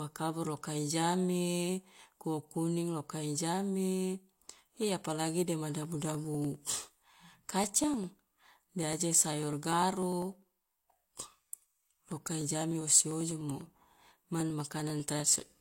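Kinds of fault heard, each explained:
Periodic USB or driver dropouts: Something on the USB bus or in the audio driver stalls at a fixed interval, and each stall skips a tiny piece of the speech, around half a millisecond, with nothing put in its place. Here the gaps repeat every 0.0995 s, about ten times a second, from 5.75 s to 15.50 s, roughly a hundred in all. They are heard as a steady train of ticks riding on the speech.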